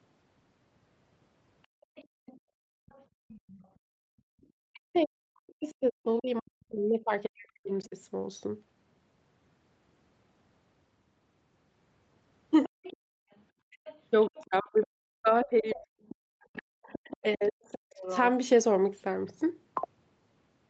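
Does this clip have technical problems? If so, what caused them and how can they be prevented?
Yes. There are three kinds of fault, and all of them point to the echo canceller on a call.

Background gated by the echo canceller: Between 1.67 and 4.42 s, and again from 13.05 to 13.3 s, the room tone beneath the speech sinks sharply, by about 35 dB at its deepest. In the first span it vanishes for roughly a second and a half in total, then comes back. The canceller heard its loudspeaker playing and clamped the microphone hard, taking the ambient sound with it until it released. Gentler residual suppression, with a comfort-noise floor, would keep the background steady.

Other side's voice leaking through: A second, fainter voice sits under the talker from 1.81 to 5.72 s, roughly 25 dB down. From 12.64 to 18.17 s it is more obvious, at around 15 dB below the speech. This is likely the far end playing from the talker's loudspeaker and reaching the microphone, with the echo canceller failing to subtract all of it. 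A headset, or an echo canceller with a properly aligned reference signal, would prevent it.

Speech suppressed in double talk: The talker's own voice is pushed down, by something like 40 dB at its worst, in brief bites at 3.46–3.57 s and 12.67–12.77 s. It also drops out in longer, patchy stretches, totalling around two seconds each, within 4.7–7.94 s and 13.72–17.95 s. These dips coincide with the leaking far-end voice, so the likely cause is both sides talking at once while the canceller, unable to separate them, attenuated everything. Better double-talk detection, or a headset that removes the echo at its source, would avoid it.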